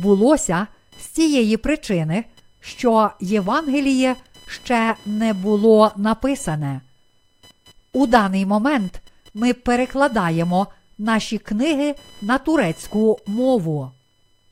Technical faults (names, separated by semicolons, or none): computer activity noise